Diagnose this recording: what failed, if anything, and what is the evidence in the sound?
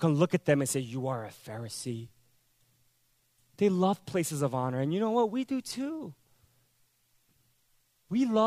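Nothing failed: no stage in the chain, from capture through to playback, leaves an audible fault anywhere in this speech recording.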